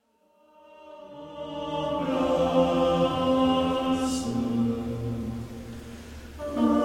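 From the very start to about 2.16 s the fade-in carries truncation distortion. Whatever stage applied the gain kept too few bits and added no dither, which fits roughly a 12-bit path. Down at the quietest levels the waveform collapses into a handful of coarse steps, so the first second or so, up to about 1.03 s, is the worst: gritty. The grit eases as the level rises, and the distortion ends at about 2.16 s.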